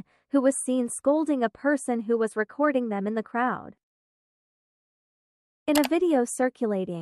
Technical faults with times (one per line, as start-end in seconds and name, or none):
none